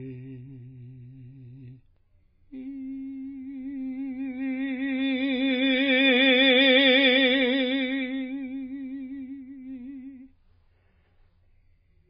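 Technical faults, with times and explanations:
throughout, MP3 compression: nothing above 5 kHz and a heavy watery swirl with smeared attacks, likely from a starved MP3 encode near 16 kbps; weak frequency lines flicker between frames. The spectrogram shows a flat ceiling at 5 kHz over patchy, blinking holes.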